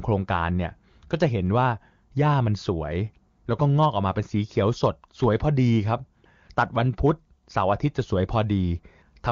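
No faults are heard in this AMR-WB wideband speech.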